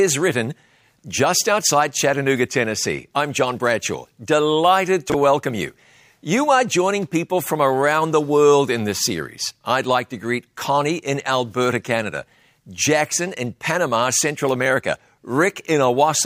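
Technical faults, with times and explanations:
5.10–5.14 s, chunks out of order. Just before "welcome you", one 21.33 ms chunk plays one chunk late, after the chunk meant to follow it. No audio is lost. The swapped order and three hard joins give a brief jumbled blip.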